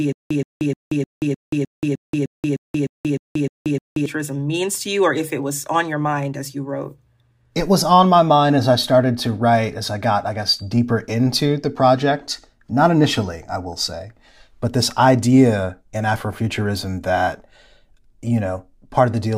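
From the very start of the clip to 4.06 s, the speech is caught in a stutter with silent gaps, already under way when the audio begins. A 124.5 ms fragment plays, drops into about 180 ms of digital silence, then returns, repeating every 305 ms, thirteen times in all. The likely cause is a player or stream stall, each retry replaying the last buffered fragment before running dry, so the speech due in that span is lost.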